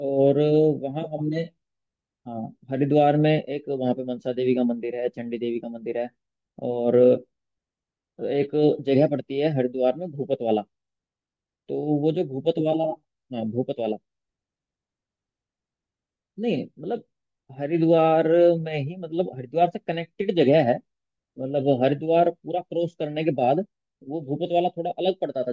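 Nothing in the recording stands out as a technical fault.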